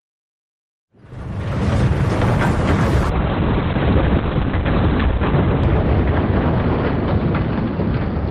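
After a smooth fade-in that settles by 2.0 s, a call bitrate drop sets in at 3.11 s and lasts to the end. The encoder falls from 32 to 8 kbps and the bandwidth narrows from 20 kHz to 4 kHz, so the audio turns muffled and watery. Unlike a plain low-pass filter, coarse coding artefacts come with the lost treble. There are no gaps, as there would be with packet loss.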